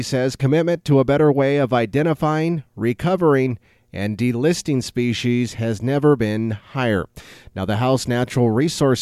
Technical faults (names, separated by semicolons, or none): none